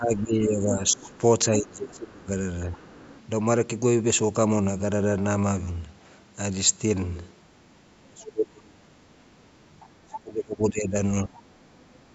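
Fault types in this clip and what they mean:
Speech suppressed in double talk: The talker's speech repeatedly sinks, dulls or breaks into pieces in three stretches, from 0.0 to 2.79 s, 7.99 to 8.91 s and 10.02 to 11.39 s. At its deepest it falls by about 20 to 30 dB, and about a second or so of speech is affected each time. The likely cause is an echo canceller that, with both sides talking at once, could not tell the near voice from loudspeaker echo and turned everything down.
Other side's voice leaking through: A second, fainter voice sits underneath the talker from 0.17 to 1.18 s, 2.23 to 3.21 s, 9.8 to 10.2 s and 11.35 s to the end. It is mostly well buried, about 25 to 30 dB below the speech, but rises to about 15 dB below around 10 s. The likely cause is loudspeaker playback of the far end reaching the microphone and not being fully cancelled, which fits its overlap with the suppressed passages.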